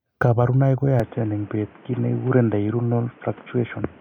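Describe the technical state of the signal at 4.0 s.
At 4.0 s the speech is still narrow and boxy, with nothing above 3.5 kHz and faint new noise well below the voice. That's been the case since 1.00 s, with no gap and no real level jump at the change. It's likely an input switched to a poorer device.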